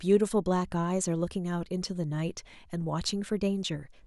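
No technical faults are audible.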